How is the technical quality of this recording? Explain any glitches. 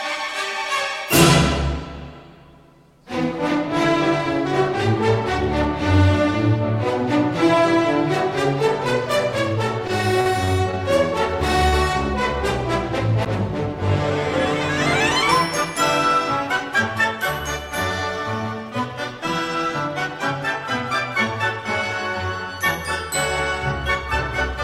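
Three separate glitches are audible, all within a few seconds of each other.

From 9.87 to 10.75 s there is repeated packet loss, giving a robotic sound. Four gaps, the longest about 45 ms, were concealed by extending the preceding audio, about 90 ms in total, while about 40 ms of material is missing. The result is choppy.

At 11.68 to 11.76 s a short stall from a late packet occurs. The jitter buffer emptied when delay rose by 40 ms, so the receiver held the last sound for 40 ms before resuming where it stopped. Nothing is lost, but the sound audibly sustains.

At 13.25 s there is a CD skip. The laser jumped tracks on the disc's spiral, muting playback for a few milliseconds. It is heard as a small tick followed by an abrupt jump to a different point in the audio.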